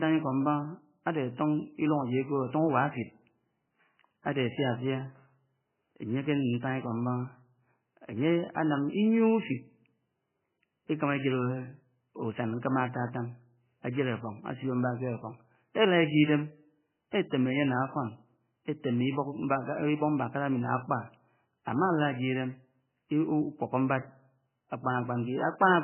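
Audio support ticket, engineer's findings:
Speech dull throughout, nothing above 3 kHz, heavily watery and swirling. Likely MP3 compression: starved encoder cut the treble, toggled weak bands. Fits around 9 kbps.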